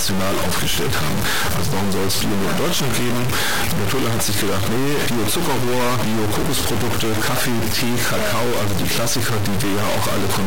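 Harsh, buzzy distortion covers the whole speech, and pauses fill with noise. The likely cause is a stuck bit of fairly high weight, about -15 dBFS.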